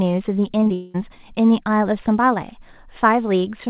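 From 0.60 to 0.72 s the sound smears and wobbles through three back-to-back patches, at 0.60–0.64, 0.64–0.68 and 0.68–0.72 s. This is short concealed packet loss: about 20 ms went missing each time, and the receiver papered over each gap by extending the preceding sound before blending back.

From 0.74 to 0.96 s a fading buzz-like continuation stands in for the audio, which then resumes with that stretch gone. This is a long network dropout, likely about 200 ms that never arrived, filled entirely by synthesized continuation rather than silence, over a call path whose band stops at 4 kHz.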